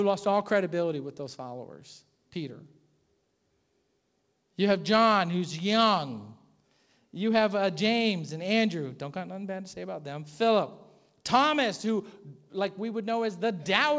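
No technical faults occur anywhere in this speech; the call microphone processing and G.722 call path are working normally, simply leaving nothing above 8 kHz.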